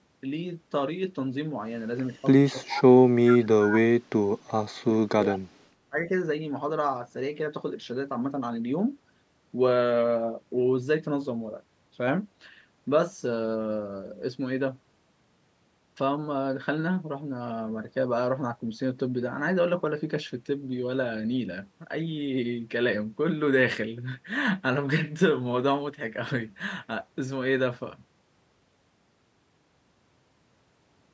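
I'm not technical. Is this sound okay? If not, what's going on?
No. Speech suppressed in double talk at 2.52–2.99, 3.19–5.66 and 5.89–6.11 s: the voice dips or cuts out, likely because both sides talked at once and the echo canceller turned everything down.

Echo leak at 2.64–2.81, 3.28–3.46, 3.74–3.78 and 5.28–5.37 s: faint scraps of voice repeat about 0.38 s late, likely loudspeaker sound the canceller missed.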